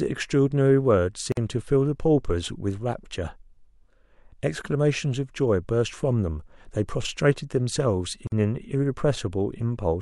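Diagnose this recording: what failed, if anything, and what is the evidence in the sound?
A gap at a join of encoded pieces opens in the speech at 1.32 to 1.37 s, about 51 ms long, and again at 8.27 to 8.32 s, about 48 ms. The failure is at the codec stage. Separately encoded segments were joined without trimming, so the encoder's start-up delay and last-frame padding remain as silence. Each gap has edges smeared by the codec, and the speech resumes exactly where it stopped.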